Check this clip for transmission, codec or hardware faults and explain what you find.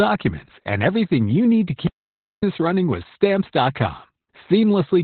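One codec fault runs throughout. Opus voice compression narrows the speech to nothing above 4.4 kHz. The coarse SILK excitation coding, which fits roughly 8 kbps, makes it hoarse and robotic, not merely muffled as with plain low-pass filtering.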